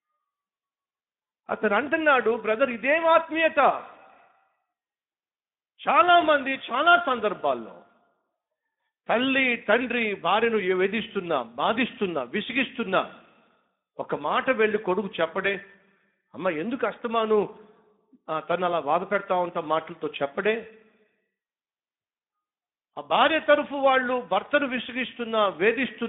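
Throughout, Speex codec damage is plainly audible: speech sounds hoarse and noisy, consistent with around 11 kbps starving the excitation, within a 200 Hz to 3.6 kHz band.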